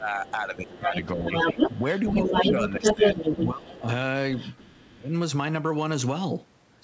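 A speech recording carried over a call path whose band stops at 8 kHz, which fits a G.722 codec at 64 kbps. Speech suppressed in double talk occurs from 0.0 to 1.58 s, 2.12 to 3.02 s, 3.48 to 3.88 s and 4.77 to 5.14 s. The talker's level dips by roughly 10 to 25 dB, deepest in the last stretch, likely because the echo canceller cannot separate near and far speech and attenuates both. The other side's voice leaking through appears faintly at 0.25 to 0.32 s and 4.37 to 4.91 s, about 20 to 25 dB below the talker. From 0.67 to 3.8 s it sits slightly louder than the talker, likely residual loudspeaker echo the canceller failed to remove.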